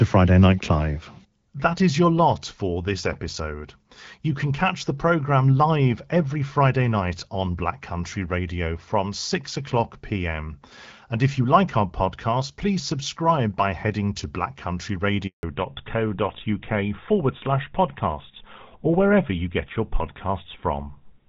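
At 15.27 s the speech cuts out in a handover gap: the call is passed from one network to another and no speech frames arrive while the link switches, so the sound dies within a few tens of milliseconds and stays silent until 15.43 s, about 160 ms in all. Unlike a burst of packet loss, there is no smeared or buzzy concealment filling the hole, just a clean silence.

From 15.43 s to the end the call stays in a fallback to narrowband. Before the gap, the wideband speech has the light coloration of HD Voice, consistent with AMR-WB around 12.65 kbit/s, with energy reaching well past 4 kHz. After it, nothing above 4 kHz remains and the voice turns duller and rougher, which points to an older GSM full-rate codec. What separates this from a simple low-pass filter is that it begins exactly at the handover and brings that added grain along with the lost top end.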